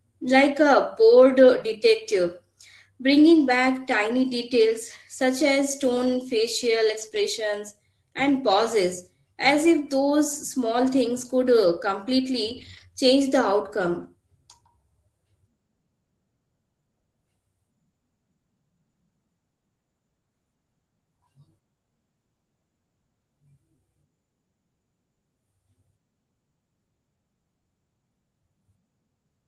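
Lost packets rebuilt from error correction occur at 1.73–1.75 s, 7.01–7.07 s, 7.13–7.19 s, 10.33–10.35 s, 12.49–12.83 s and 13.99–14.05 s. In each case, audio failed to arrive, but the following packet carried a low-bitrate backup copy that the Opus decoder played instead. Nothing drops out. Those stretches turn briefly grainier and noisier than the surrounding 12 kHz-limited call audio. The 0.34 s run near 12.5 s is the longest.

A short concealed packet loss falls between two of those repairs, at 7.09–7.13 s. About 20 ms arrived too late and had no backup, so the receiver extended the preceding sound for roughly 16 ms before fading back into the real signal. This is heard as a fleeting smear or wobble sitting inside the already rough patch around 7.0–7.2 s.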